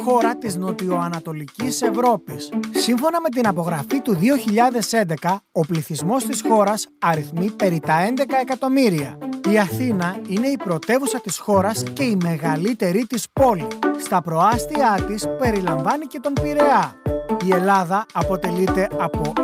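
No technical faults can be heard anywhere in the recording.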